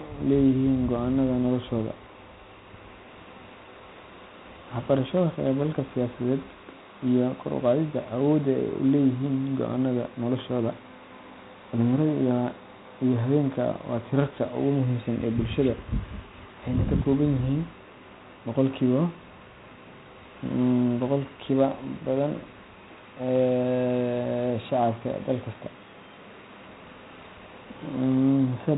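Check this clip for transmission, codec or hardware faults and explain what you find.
One codec fault runs through the whole recording.

4-bit ADPCM compression, throughout: each sample is coded as a coarse 4-bit step from a prediction, so heavy gritty hiss rides on every loud passage of speech and sharp onsets distort. Nothing reaches above 3.8 kHz, which fits 32 kbps at an 8 kHz rate and leaves it dull.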